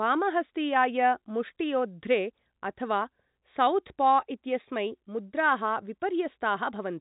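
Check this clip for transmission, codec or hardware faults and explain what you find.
No transmission, codec or hardware faults turn up in this clip.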